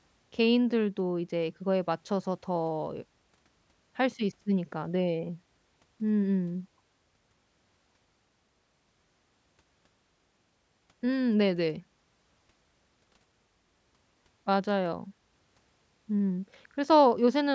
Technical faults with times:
none

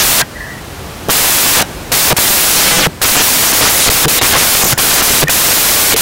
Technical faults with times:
0.00-6.01 samples built from the wrong bytes

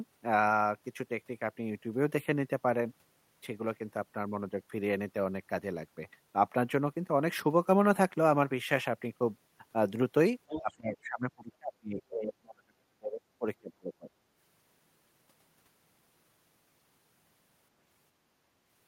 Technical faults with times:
10.48-10.76 other side's voice leaking through
10.61-14.21 speech suppressed in double talk

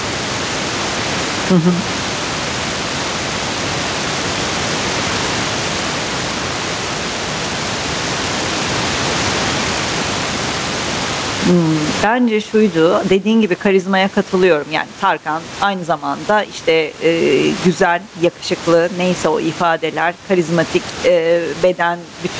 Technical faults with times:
0.00-22.39 gain pumping

